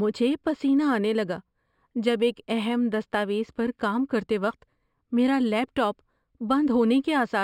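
Throughout the speech there is imaging from linear upsampling: straight-line interpolation from what sounds like a 12 kHz rate to 44.1 kHz dulls the top of the band and leaves mirrored images between 6 and 12 kHz, roughly 35 dB down, heard as a faint metallic shimmer on sibilants.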